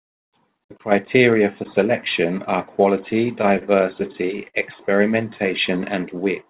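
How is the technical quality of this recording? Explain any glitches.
The recording has two short bursts of stutter, and the whole clip is band-limited, with nothing above 4 kHz. That limit points to narrowband telephone coding along the lines of G.711 at 64 kbps.

Repeated stalls (stutter) occur from 3.23 to 3.64 s and again from 4.0 to 4.57 s. Packets reached the receiver late, so its jitter buffer kept running dry. Each time, it extended the last sound until fresh audio arrived. In the first burst the holds total about 49 ms, the longest 22 ms. In the second they total 86 ms, with one 56 ms hold that fades. Nothing is lost, but both passages drag and judder.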